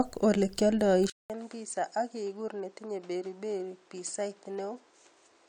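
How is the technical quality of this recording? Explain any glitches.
One glitch affects the recording. Input switched to a poorer device at 1.1 s, likely a change to a narrower-band microphone. After a 200 ms silence, the speech loses everything above 9.1 kHz, drops about 10 dB and gains a background noise roughly 30 dB down.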